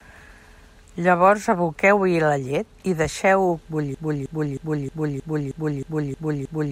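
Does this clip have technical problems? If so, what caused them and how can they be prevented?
Yes. From 3.95 s to the end, the speech falls into a broken-record loop. A 0.31 s fragment repeats back to back nine times, most likely because the player or stream stalled and kept resending the last piece it held, so the audio that should have followed is lost. On a spectrogram or waveform, this appears as one identical block tiled at exact 0.31 s intervals. To prevent it, detect stalls and output silence or reconnect rather than replaying the held buffer.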